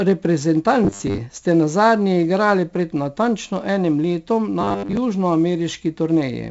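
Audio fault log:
throughout: 4-bit ADPCM compression. Coarse 4-bit steps from a prediction leave heavy gritty hiss tracking loud passages; nothing above 7.7 kHz, which fits about 64 kbps.
0.84–1.19 s and 4.61–4.97 s: robotic sound from repeated short buffers. Late audio was likely padded by looping about 10 ms chunks, replacing most real sound with a rigid 100 Hz buzz, the first just before "ste nazadnje igrali pred".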